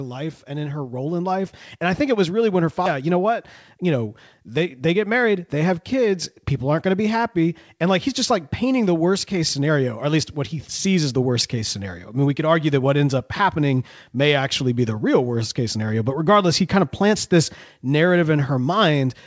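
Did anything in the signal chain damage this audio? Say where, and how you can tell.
Yes. From 0.45 to 2.27 s the speech and the background swell together, rising by about 7 dB just before "really when her". This is automatic gain rising in the call processing: the gain control judged the input too quiet and raised it gradually.

Right after "really when her", at 2.86 to 2.88 s, playback jumps forward with no gap, and roughly 0.4 s of speech is gone. This is a skip ahead at the network or jitter-buffer stage: a stretch was discarded while later audio was already queued.

From 3.77 to 5.71 s, leading into "kids people aren't going", the speech sounds hurried, about 8% faster at unchanged pitch. This is a jitter buffer speed-up: holding more audio than its target, the buffer repeatedly cut pitch-period-sized pieces, about 150 ms in all.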